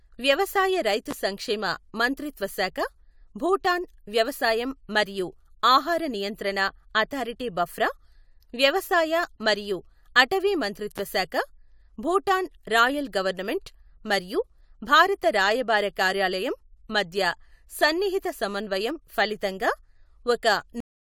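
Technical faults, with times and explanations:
1.11–1.14 s and 10.98–11.01 s: loud pop. Each is a single sharp pop about 10 dB above the speech, which continues underneath. The first comes just before "సంక్షేమ మంత్రిత్వ శాఖ" and the second just after "మరియు అటవీ". A sudden voltage pulse from a plug, switch, static or driver glitch is the likely cause.
20.80 s: cut-off end. The speech stops abruptly mid-sound and drops straight to silence with no decay. The final buffers were never written or played.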